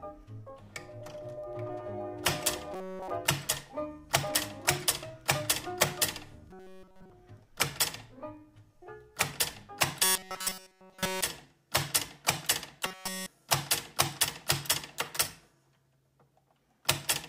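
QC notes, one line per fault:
2.74–3.11, 6.51–7.10, 10.04–11.24 and 12.86–13.26 s: robotic sound from repeated short buffers. A rigid 188 Hz buzz replaces essentially all sound, likely from an about 5 ms chunk looping. It shows as evenly spaced harmonic stripes and a repeating waveform cycle.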